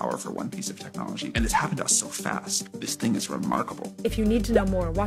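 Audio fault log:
0.34–5.06 s, periodic clock jitter: interference is wobbling the converter's sample clock at around 1 kHz, so every component of the sound picks up sidebands roughly 1 kHz above and below it. Higher-frequency components are smeared more, which gives a rough, metallic edge that drops out whenever the sound falls silent. On a spectrogram, paired ghost traces run parallel to each strong component at that offset. The waveform looks essentially normal.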